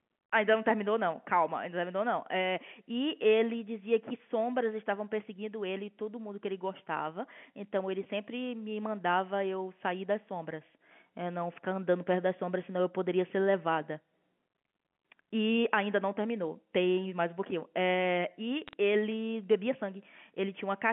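Speech over a G.711 phone line, band-limited to roughly 150 Hz to 3.4 kHz, with a short burst of bit errors on the digital line from 18.68 to 18.73 s. Flipped bits corrupt single samples, giving a brief patch of sharp ticks and crackle over the speech, consistent with an error rate of a few bits per thousand.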